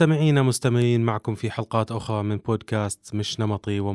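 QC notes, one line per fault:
No audible faults found.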